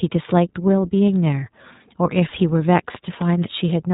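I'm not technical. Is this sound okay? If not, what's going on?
No. Throughout, the speech has passed through the iLBC codec, a phone-call compressor that strips everything above about 3.8 kHz and rebuilds each 20 ms slice separately. Unlike plain muffling, it also adds a noticeably rough, slightly synthetic texture.

From 2.41 to 3.22 s there are four CD scratch ticks, each only a few thousandths of a second long. A damaged spot on a disc passes the player's laser once per turn, so these ticks come at a steady rhythm rather than as random crackle.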